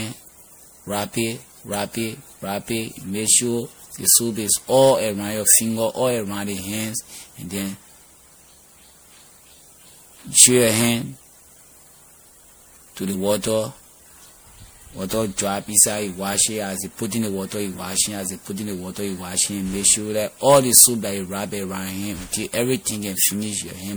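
Generation loss runs through the whole recording: the speech sounds swirly and hollow, with smeared consonant attacks and a watery shimmer that builds beyond what a single lossy pass would leave. The likely cause is repeated MP3 decoding and re-encoding, around seven passes at a rate that points to 96 kbit/s, each landing on a shifted frame grid so quantisation noise and spectral holes stack up. Nothing remains above 20.9 kHz.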